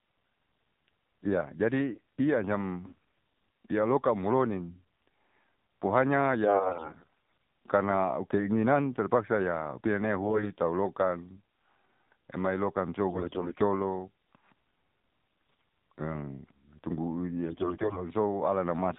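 The whole clip passes through the AMR narrowband mobile codec at a low rate, consistent with the 7.4 kbps mode. Nothing above 4 kHz survives, and the thin pulse-driven vocal-tract model leaves the speech plainly buzzy and synthetic.

AMR bit errors strike at 2.86–2.97 s, 6.44–7.10 s, 10.22–10.52 s, 13.08–13.63 s, 15.40–15.66 s and 17.46–18.06 s. Weakly protected bits arrive flipped at high rates, the heaviest around 15.4 s. Excitation pulses and fine pitch, gain and spectral values land wrong, so the voice keeps roughly its pitch and level but turns hoarse, scratchy and gargly.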